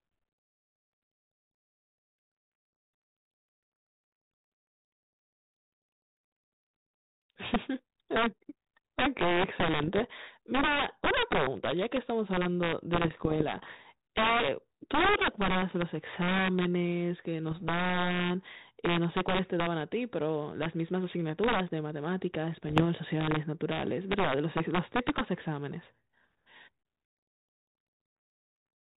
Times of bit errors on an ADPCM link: 9.83-10.11, 12.95-13.85, 17.51-17.63, 22.65-22.84

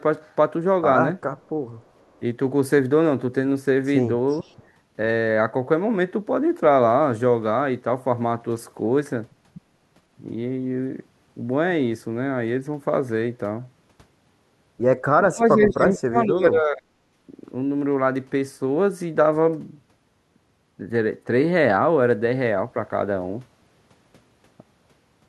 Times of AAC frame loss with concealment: none

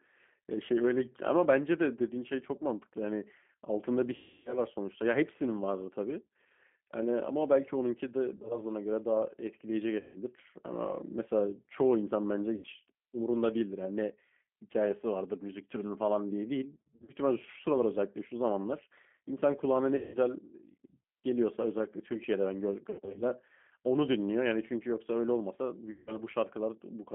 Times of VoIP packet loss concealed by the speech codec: 4.16-4.58, 8.36-8.60, 9.99-10.18, 12.56-12.68, 16.78-17.13, 19.96-20.18, 22.90-23.24, 25.91-26.17

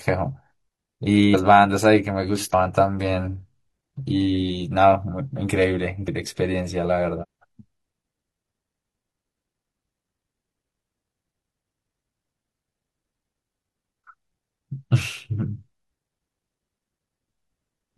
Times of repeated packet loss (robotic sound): none

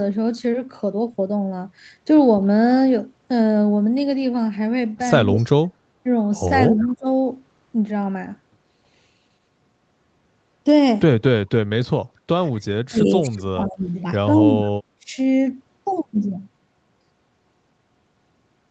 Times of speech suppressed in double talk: 5.33-5.72, 6.71-7.06, 12.88-13.98, 14.37-15.18

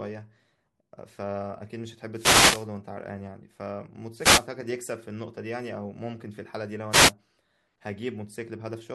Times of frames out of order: none

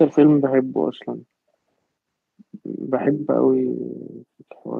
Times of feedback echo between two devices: none

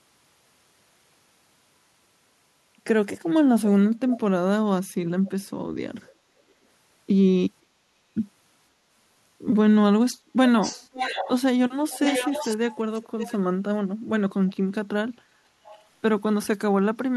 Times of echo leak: 4.11-4.18, 5.26-5.45, 6.06-6.14, 10.61-11.42, 11.90-13.37, 14.47-14.53, 15.64-15.83

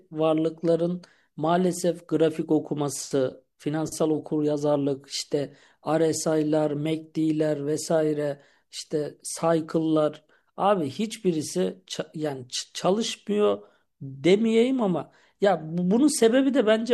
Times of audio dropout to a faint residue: none

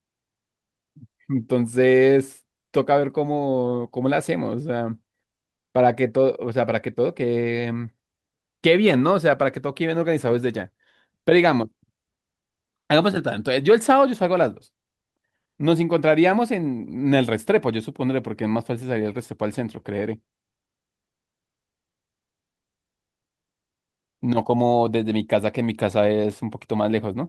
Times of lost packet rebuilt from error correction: 7.43-7.65, 8.89-8.91

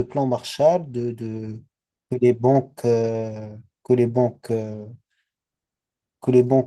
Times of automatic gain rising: none

